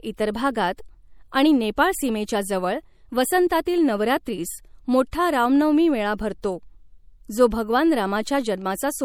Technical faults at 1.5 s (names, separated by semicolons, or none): MP3 compression